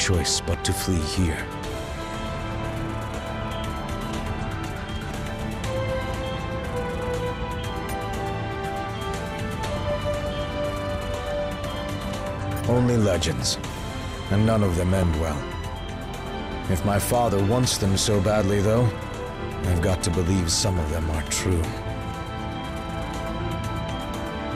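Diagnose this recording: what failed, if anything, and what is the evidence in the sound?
DAB burbling at 6.94–7.08 s, 9.56–10.04 s, 13.15–13.78 s, 14.96–15.03 s and 21.64–21.88 s, arising at the broadcast reception and MP2 codec stage. Each burst brings short blips of noise in single sub-bands. Weak reception leaves a residual bit error rate of a few tenths of a percent that gets past error correction, corrupting samples and scale factors inside the MP2 frames.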